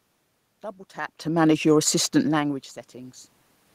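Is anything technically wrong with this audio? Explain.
Yes. From 1.21 to 3.26 s the speech and the room noise behind it swell together, gradually climbing by about 4 dB. This is automatic gain rising: the gain control judged the input too quiet and slowly raised its gain, lifting the background along with the voice. The level shifts near 1 and 2 s come from the talker moving relative to the microphone, not from the system.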